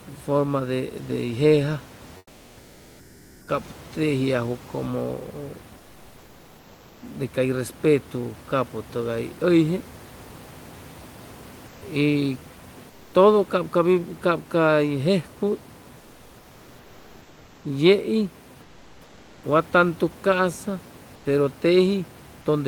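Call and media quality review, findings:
Comfort noise in place of the background at 2.17–3.47, 5.77–7.01, 11.67–11.81, 12.89–13.13, 18.61–19.43 and 21.15–21.25 s. In the pauses the room noise goes flat and featureless, about 2–6 dB quieter. Likely Opus DTX stopping transmission and the receiver synthesising noise.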